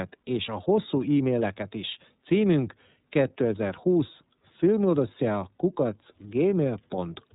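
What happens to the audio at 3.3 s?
At 3.3 s you're hearing the iLBC codec, and it's not a local event: the damage runs through the whole clip. The speech gets chopped into 30 ms frames, each coded independently with no help from the one before, so the voice comes out a bit rough and synthetic. Nothing survives above about 3.8 kHz, hence the dull, phone-line feel. The damage is plainly audible, and it sounds like the 13.33 kbps mode.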